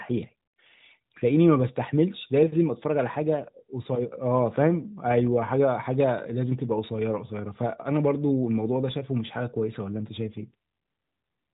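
No faults to report in this speech; it is carried over an AMR narrowband mobile codec at 12.2 kbps, so the band stops at 4 kHz with only light codec colouring.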